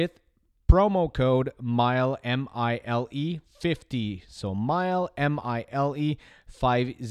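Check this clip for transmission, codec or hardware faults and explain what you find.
I found no faults in this clip.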